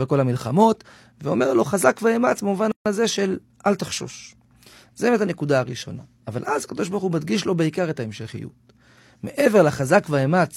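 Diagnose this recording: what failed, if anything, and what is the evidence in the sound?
At 2.72 s the speech drops out abruptly and returns at 2.86 s, a hole of about 142 ms with softened edges, after which the speech resumes exactly where it stopped. That signature points to a gap at a join of encoded pieces, a fault at the codec stage. The audio appears to have been encoded in segments of about 10 s and concatenated without trimming, so the encoder's start-up delay and the padded final frame remained as silence at the boundary.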